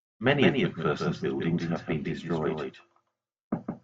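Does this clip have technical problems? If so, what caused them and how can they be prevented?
Yes. A doubled audio track runs through the whole speech clip: a second full-band copy trails the original by roughly 150 ms at about 5 dB lower, with no decay or room colour, so it sounds like a hard slapback. On a waveform each burst is shadowed by a slightly smaller twin; a spectrogram shows every onset repeated as a crisp vertical edge. The likely cause is the signal being captured twice, once through a slower path. To prevent it, route each source through one capture path only and mute any monitoring or loopback feed that re-enters the recording.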